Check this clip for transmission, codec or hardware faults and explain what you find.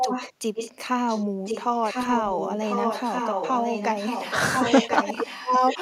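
A delayed second copy of the speech runs under the main voice in six stretches: 0.00 to 0.33 s, 0.54 to 0.72 s, 1.08 to 1.25 s, 1.45 to 1.64 s, 1.83 to 4.37 s, and 4.56 to 5.78 s. It trails by about 1.05 s. It is loudest at the start, around 5 dB under the speech, faint near 1.1 s, and otherwise about 10 dB down. This is an echo leak, likely from a loudspeaker whose sound reached the far end's microphone and got past its echo canceller.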